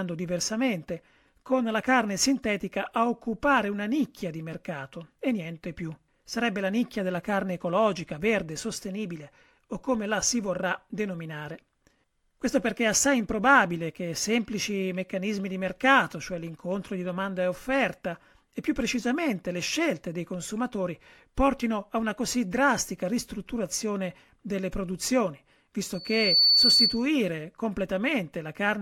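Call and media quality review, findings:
Loudspeaker feedback squeal, 25.94–27.07 s, right after "drastica ristrutturazione delle produzioni". Single 4.5 kHz tone swells over under half a second to roughly 10 dB above the speech. Mic picking up its own loudspeaker, loop gain exceeding unity at that frequency.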